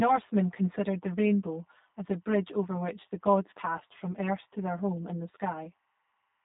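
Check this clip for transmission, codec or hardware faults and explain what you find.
Two faults run through the whole recording.

Channel delay (comb filtering), throughout: one channel arrives roughly 10 ms late and the two are summed to mono, so shared content cancels in notches spaced about 100 Hz apart, starting near 50 Hz. The speech sounds hollow and phasey.

G.729 codec, throughout: the speech is rebuilt from a vocal tract filter, a pitch predictor and a few pulses per frame, which fits an 8 kbit/s G.729A stream. Nothing passes above 3.8 kHz, and the damage is plainly audible as rough, synthetic-sounding speech.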